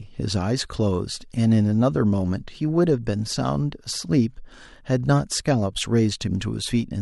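Nothing in the recording stood out as a technical fault on listening.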